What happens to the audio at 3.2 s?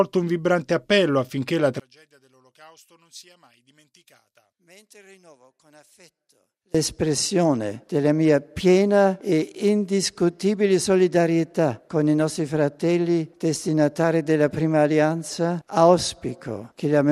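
At 3.2 s the sound sits inside a collapse from 1.80 to 6.75 s, falling by about 32 dB to a faint residue. The likely cause is one channel inverted: when opposite-polarity channels sum to mono, their shared content cancels. Unlike a dropout, a faint difference signal remains.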